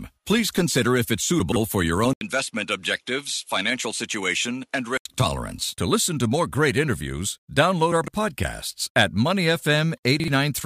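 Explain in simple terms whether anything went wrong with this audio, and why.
Three times in this recording, pieces of audio were put back in the wrong order. The recording is stored in small chunks of 40 milliseconds, and here a chunk arrived late and was played after the ones meant to follow it. This fault, chunks out of order, happens at 1.4 to 1.56 s and again at 7.92 to 8.08 s, where a chunk landed three places late, and at 10.2 to 10.28 s, where one landed a single place late. Nothing is missing, but each spot sounds like a brief jumbled stutter in the speech.

Between 2.13 and 5.05 s the input switched to a poorer device, most likely the system changing to another microphone or a headset partway through. At the switch there is a gap of about 80 milliseconds of silence. After it, the speech sounds duller and a little quieter, with nothing above 11.5 kHz, and a faint new background noise appears. 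The fuller, clearer sound returns at 5.05 s.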